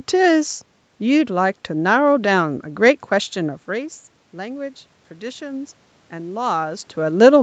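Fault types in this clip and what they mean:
automatic gain rising: from 3.37 to 6.95 s, speech and room noise swell together by about 5 dB as the gain control slowly compensates for quieter input.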